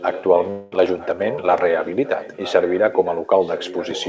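From 0.0 to 1.88 s a faint delayed copy of the speech trails the original by about 0.95 s, roughly 15 dB down: an echo leak, likely from a far-end canceller failing to remove its loudspeaker pickup. At 0.50 to 0.74 s a long network dropout likely removes about 0.22 s of audio; concealment fills the gap with a fading buzz instead of silence. From 2.04 s to the end the same echo leak returns, again about 0.95 s late and well below the speech level.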